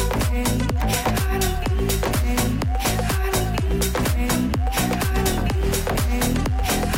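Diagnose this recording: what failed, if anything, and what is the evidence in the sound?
Mains buzz got into the analogue wiring. From 0.75 s to the end there's a steady, raspy buzz sitting roughly 25 dB under the sound. It's built on 50 Hz with harmonics running into the kilohertz range, which points to switching spikes from a dimmer, rectifier or poor shielding.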